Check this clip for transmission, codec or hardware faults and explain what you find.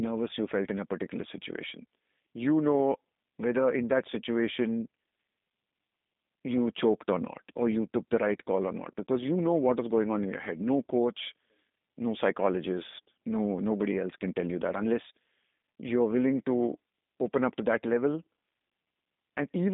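The speech has passed through a G.729 codec for its whole length, which is the one fault present.

Throughout, the audio carries G.729 coding damage: a roughened, slightly synthetic texture. The codec rebuilds each 10 ms frame from a vocal-tract filter, a pitch predictor and a few coded pulses, fitting an 8 kbit/s G.729A stream. On a spectrogram, energy sits in roughly 200 Hz to 3.7 kHz, with nothing above 3.8 kHz. The waveform shows no visible fault.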